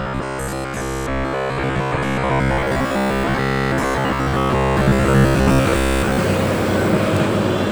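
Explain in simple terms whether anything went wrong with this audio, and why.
Fresh audio likely arrived too slowly, so the playback kept repeating tiny 15 ms slices to fill the gaps, skipping most of the real sound. From 0.02 s to 6.18 s this gives robotic sound from repeated short buffers, a stiff, metallic buzz at about 67 Hz.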